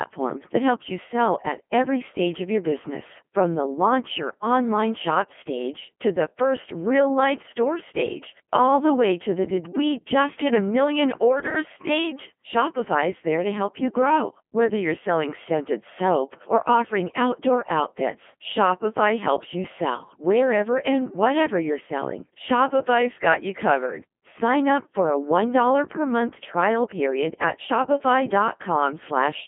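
Robotic, buzzy speech throughout, limited to 200 Hz to 3.4 kHz: the Codec 2 vocoder rebuilds the voice from sine waves, which fits a 2.4 kbit/s mode.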